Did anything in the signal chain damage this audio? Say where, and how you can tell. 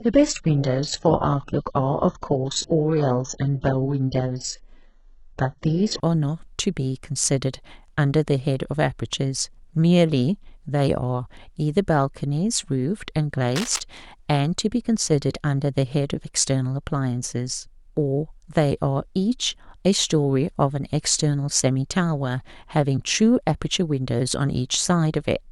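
Yes, in two places. The first is at the network and codec stage. From the start to 6.0 s the speech has nothing above 8 kHz. The treble sounds thin or synthetic, and codec artefacts are heavy. At 6.0 s the quality jumps up with no gap. That pattern fits an adaptive stream starting at a low bitrate. It sounds like a very low-bitrate HE-AAC version near 8 kbit/s that switches to AAC-LC around 96 kbit/s once the player has measured the connection.

The second is in the analogue wiring. From 13.55 to 13.82 s there is a short burst of dense, uneven crackle over the speech. It sits roughly 10 dB below the signal. It sounds like cable scratch noise, likely from a worn cable, connector or control being moved. As the contact shifts, its resistance changes rapidly. That adds ragged noise bursts for as long as the movement lasts.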